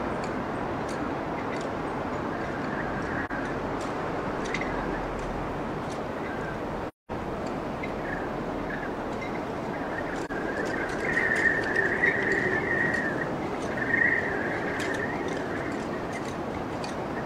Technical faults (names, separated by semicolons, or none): AAC frame loss with muting